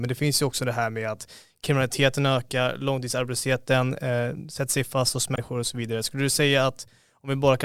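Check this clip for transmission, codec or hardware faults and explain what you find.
One fault turns up in this speech recording: damaged data in the compressed stream, from 5.32 to 5.38 s. There, corrupted bytes make the decoder misread frames and lose sync until it finds the next valid header. The result is a brief glitch of about 66 ms. On a spectrogram it shows as a short vertical disruption breaking the speech harmonics, and on the waveform as an abrupt discontinuity.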